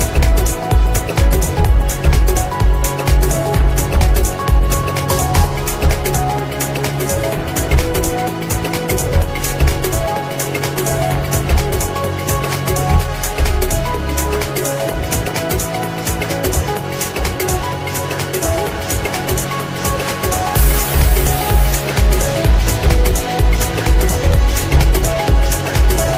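No technical faults occur at any point in this recording.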